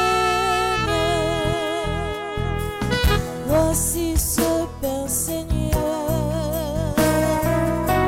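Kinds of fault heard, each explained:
Compressed frames skipped: missing coded frames make the audio jump ahead, roughly 0.4 s at 1.84 s and 0.1 s at 5.74 s.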